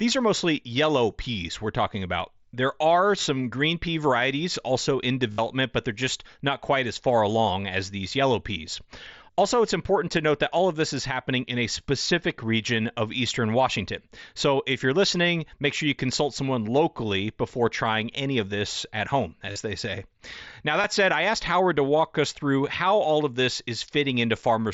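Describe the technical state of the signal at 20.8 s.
At 20.82 to 20.84 s, just before "said I asked", concealed Bluetooth headset packet loss fills about 22.5 ms. This fits roughly three lost packets. The receiver repeats the best-matching recent waveform, which sounds like a brief buzzy hold. On the waveform it appears as a copied periodic stretch, and on the spectrogram as flat harmonic bands capped at 8 kHz by the mSBC link.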